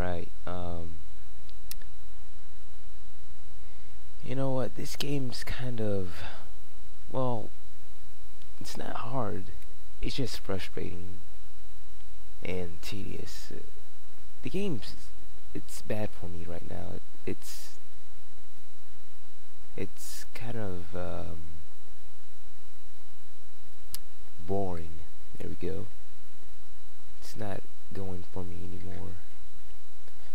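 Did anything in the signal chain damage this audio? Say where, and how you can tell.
No, nothing in the signal chain damaged this audio.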